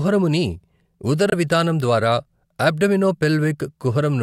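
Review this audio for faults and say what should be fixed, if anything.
Bluetooth dropout at 1.30 to 1.33 s: the speech drops to silence for 21 ms and resumes further on, likely one late frame discarded. Keeping the headphones close to the source and away from crowded 2.4 GHz traffic prevents it.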